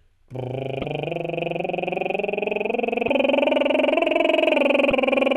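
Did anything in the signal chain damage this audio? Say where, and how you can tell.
Yes. Damaged data in a compressed stream, at the codec stage, at 0.81–0.85 s, 3.06–3.09 s and 4.89–4.92 s, each a roughly 34 ms blip in the music. Corrupted bytes made the decoder misread those frames and lose sync until it found the next frame header.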